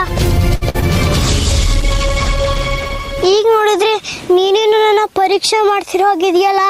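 Right at 0.55 s there's a short stall from a late packet: the jitter buffer ran dry, so the last sound gets held for about 59 ms, then picks up where it left off, nothing lost, just 59 ms more delay. Straight after, at 0.69 to 0.76 s, comes a burst of packet loss, with 49 ms of concealment fading the last sound out and about 40 ms of real audio skipped. Then at 0.80 to 0.84 s a short concealed packet loss smears things briefly, 17 ms filled and 20 ms gone. From 1.23 s a call bitrate drop takes the encoder from 48 down to 12 kbps, bottoming out for about a second, so the audio gets coarser and loses its top end until it clears at 4.86 s. Finally, 5.86 to 6.61 s, a jitter buffer speed-up trims around 70 ms, running the audio at 107% speed with the pitch unchanged, so it sounds hurried.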